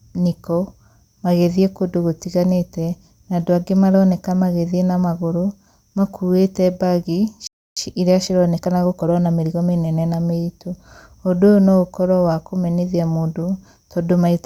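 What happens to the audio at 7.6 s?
At 7.6 s the speech falls into a playback stall: right after "na magũrũ makuĩte mbagi" the output goes silent from 7.47 to 7.77 s, about 0.3 s, likely because the player ran dry or was blocked, then resumes. On a waveform it's a flat gap; a spectrogram shows an empty vertical band.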